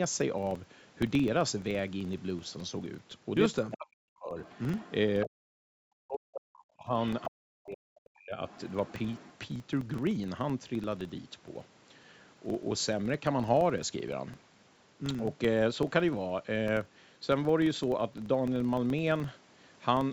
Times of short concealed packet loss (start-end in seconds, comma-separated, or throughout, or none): none